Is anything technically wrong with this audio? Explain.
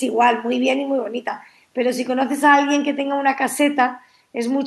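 No, there are no technical faults.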